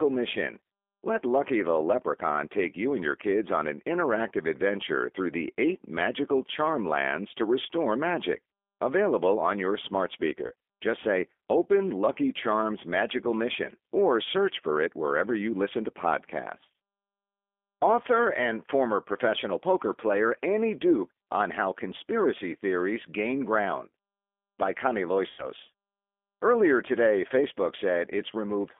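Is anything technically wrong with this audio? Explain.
Yes. The speech has been passed through a G.729 codec for the whole clip, and it also carries two instances of VoIP packet loss concealed by the speech codec.

The G.729 codec, in its G.729A form, does not store the waveform. It models each 10 ms frame with a vocal tract filter, a pitch predictor and a sparse set of pulses, and the decoder resynthesises speech from those parameters. The line band runs only from about 250 Hz to 3.5 kHz, which fits an 8 kbit/s telephone codec. The damage is plainly audible: the speech is thin and boxy, and it has a rough, slightly synthetic grain.

VoIP packet loss concealed by the speech codec occurs twice. At 10.47 to 10.54 s, just after "on your smart", about 40 ms went missing, which fits two lost packets. At 25.30 to 25.48 s the gap is about 80 ms, consistent with four packets. In each case the decoder filled the hole by repeating its last pitch and filter settings while lowering the gain. 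You hear a brief stretched smear, a buzzy tone or coloured noise, that fades, and the speech stays weak or distorted for a moment after real audio resumes.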